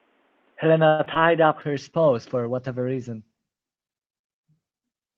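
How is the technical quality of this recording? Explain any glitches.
The recording has several clear transmission and capture faults, concentrated in the first half, with reduced quality persisting to the end.

Input switched to a poorer device, 0 to 1.6 s: nothing is present above 3.8 kHz, so the speech sounds boxy and narrow. The level is about 5 dB different, with a faint added noise floor. The likely cause is capture through a lower-grade microphone or headset call profile.

Call audio freeze, 0.87 to 1.01 s: for 116 ms the last sound is stretched into a fading buzz before speech resumes exactly where it stopped. Nothing is lost, only delayed. The likely cause is late packets draining the jitter buffer.

Short concealed packet loss, 1.05 to 1.08 s and 1.14 to 1.28 s: in each, about 20 ms of audio never arrived and was papered over by extrapolating the preceding sound. Each is heard as a brief smear or wobble, with a small piece of speech missing.

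Call bitrate drop, 1.75 s to the end: the top end is cut at 8 kHz instead of reaching 20 kHz, and the speech turns coarse and watery. This fits the encoder being throttled from roughly 64 to 16 kbps after the bandwidth estimate fell.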